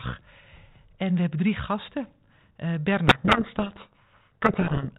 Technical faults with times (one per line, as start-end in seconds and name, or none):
3.08-4.89 codec payload misread